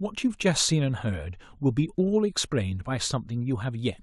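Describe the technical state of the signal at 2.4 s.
At 2.4 s the speech signal is intact, with no dropout, clipping, glitch or other fault to be heard at that point.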